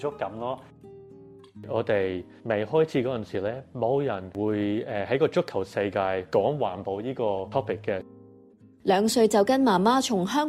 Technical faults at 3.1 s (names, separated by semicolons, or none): none